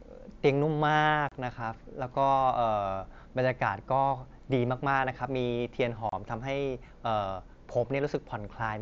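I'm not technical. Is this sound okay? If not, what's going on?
No, there are two brief dropouts. At 1.29 to 1.32 seconds and again at 6.09 to 6.13 seconds the speech cuts out for about 30 milliseconds, with sharp edges that can click. This is unconcealed Bluetooth headset packet loss: a few of the tiny chunks of sound sent from the headset to the phone over the wideband mSBC link went missing, which fits a handful of lost packets each time, and nothing patched over the gap, so you hear a little hole.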